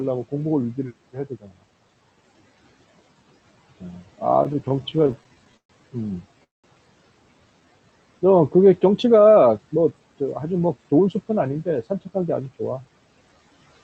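From 1.13 to 1.5 s the noise suppressor cuts into the speech, mistaking parts of it for background and pulling them down by as much as about 15 dB, roughly 150 ms in all. Consonants and word endings sound swallowed. On a spectrogram, energy thins or vanishes in patches. The waveform envelope dips sharply there while the speech continues around it.

Between 4.43 and 5.71 s the audio stutters with repeated stalls. Packets kept reaching the jitter buffer too late, so it ran dry over and over and the receiver stretched the last sound to fill 273 ms, with the longest wait 125 ms and about a fifth of the span concealed. Nothing is lost, but the speech drags and hiccups. A spectrogram shows smeared, repeated harmonic bands at each stall, and fading in the longer ones.

At 6.44 to 6.66 s a call audio freeze holds the sound. A brief continuation of the last sound fades into about 180 ms of silence, 200 ms inserted in total, and then the speech resumes where it stopped with nothing missing. 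The likely cause is packets held up in transit, shifting the delay by 200 ms. On the waveform it appears as a short decaying tail followed by a flat gap.

From 9.58 to 11.08 s a jitter buffer speed-up plays the speech at about 111% speed, removing roughly 200 ms by dropping short pitch-period slices to shrink the accumulated delay. Pitch stays the same, but the delivery sounds hurried. Spectrogram features are compressed in time without shifting in frequency, and the waveform shows tiny splices between cycles.

The Opus call path limits the audio to 8 kHz, and the spectrogram shows a clean ceiling there.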